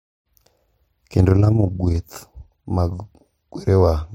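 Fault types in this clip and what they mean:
Overlap-add ripple: from 1.16 to 1.98 s the speech takes on a fast, rough flutter, a tremolo with the level swinging by about 6 dB at around 30 times a second. The audio has been split into windowed frames and rejoined with an overlap whose windows do not add up to a steady gain, so each frame boundary leaves a dip or bump in loudness, and that once-per-frame pulsing is what the ear picks up as the flutter.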